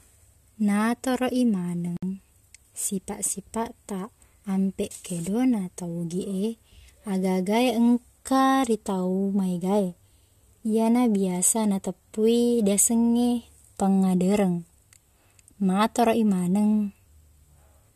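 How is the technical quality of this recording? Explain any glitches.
There's one glitch: a gap at a join of encoded pieces, running from about 1.97 s to 2.03 s. The speech just drops out for roughly 58 ms, then resumes exactly where it left off. That happens when separately encoded segments get butted together without trimming, so the encoder's start-up delay and last-frame padding both survive as dead air. The codec smears the edges of the gap, so the truly silent stretch is shorter than that.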